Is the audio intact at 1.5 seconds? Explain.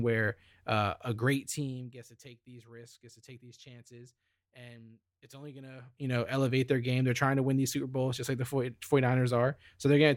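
No. At 1.5 seconds you're in the middle of a stretch of zipper noise running from about 1.1 to 2.1 s, just after "where uh a" and ending before "to take these risks". The level drops by roughly 20 dB there, but in discrete jumps, around fifty a second, instead of a smooth ramp. Each jump puts a tiny click into the speech, so you hear a fine ticking, zipping texture riding on the voice while it fades.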